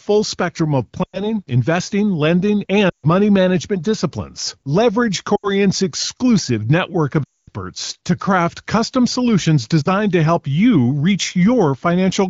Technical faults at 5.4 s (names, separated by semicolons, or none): lost AMR speech frames